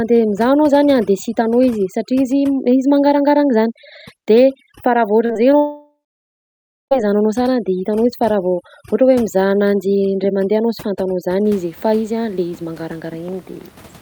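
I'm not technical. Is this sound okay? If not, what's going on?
No, there are three problems.

Overdone noise removal: From the start until 11.45 s, just before "izy fa", a tool meant to clean up the background was set far too strong. Besides the room noise, it also cut away quiet parts of the voice. The background drops away and breaks up into little twinkling specks. After that point the room's faint natural background comes back.

Short concealed packet loss: Twice in quick succession, two tiny pieces of the call arrived too late to be played, the first lasting 0.04 s at 5.25 s and the second 0.02 s at 5.33 s. Each time, the receiving device covered the gap by stretching the sound just before it and then blending back into the real audio. You hear a brief smear or wobble there, and a short sound may go missing.

Long network dropout: At 5.57 s the sound keeps going for a moment as a fading buzz or hiss, then goes quiet for about a second before the speech returns at 6.93 s. 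About 1.3 s of the recording is simply gone, and the speech picks up further on as if skipping ahead. This is likely the connection losing audio altogether, with the device briefly trying to cover the gap before giving up.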